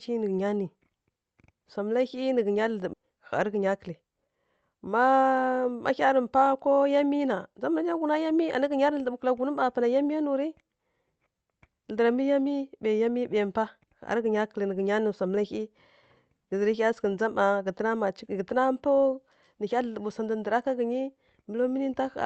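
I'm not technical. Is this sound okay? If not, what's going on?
No. Just after "ghǝnya nǝ gha", at about 2.93 to 2.95 s, there is a skip ahead. The call's jitter buffer, which holds incoming audio briefly to smooth out uneven network arrival, had fallen about a second behind, so it threw away roughly a second of speech and jumped straight to newer audio. You hear the talk lurch forward with no pause. The two sides are stitched together directly, so that piece of speech is simply gone.

Right after that, from about 3.02 to 4.62 s, comes a jitter buffer speed-up. The buffer was still holding more audio than it wants, so it trimmed many tiny slices, each only a fraction of a syllable long, to catch up. About 150 milliseconds were removed in total. The speech plays roughly 8% faster but at the same pitch, so that stretch sounds slightly rushed. The call codec in use keeps sound only up to about 8 kHz.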